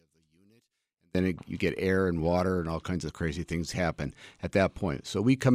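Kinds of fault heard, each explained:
One channel inverted: From the start to 1.15 s the speech almost disappears, dropping by about 38 dB and leaving only a faint residue. Full level returns just before "it you get air". This is likely one stereo channel with reversed polarity. The centred speech is nearly identical in both channels, so summing to mono cancels it, and only the small difference between left and right survives.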